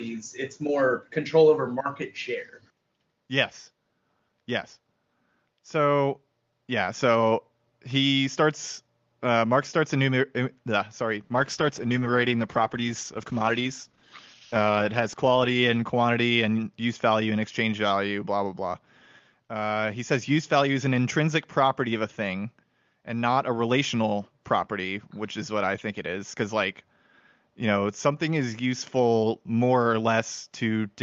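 A call bitrate drop hits this speech recording from 11.25 s to 18.85 s: the call's bandwidth estimate fell and the Opus encoder was pushed to far fewer bits, which fits a fall from about 32 kbps to 11 kbps. Coarser coding makes the voice rough and watery, and the top end closes in from 12 kHz to 8 kHz, so it turns muffled, worst for about 4.4 s before recovering. Faint room noise sits about 55 dB below the speech.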